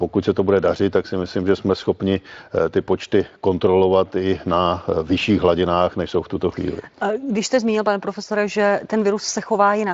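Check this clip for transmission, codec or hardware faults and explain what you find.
Nothing in this speech sounds faulty.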